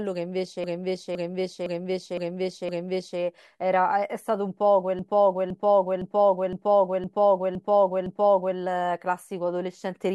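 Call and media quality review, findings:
Repeated frames, 0.64–3.20 s: compressed block of about 512 ms, consistent with a six-frame run, written out again five extra times. Same half-second replays as a stutter, 2.56 s added.

Repeated frames, 4.99–8.58 s: same 512 ms block size, replayed seven extra times by the decoder. Looping stutter, 3.58 s added.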